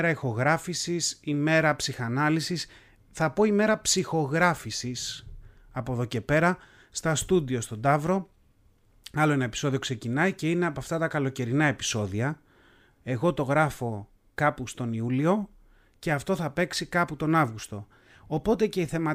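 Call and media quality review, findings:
No faults found: the speech signal stays continuous and stable throughout, with no audible defects attributable to capture, transport or playback.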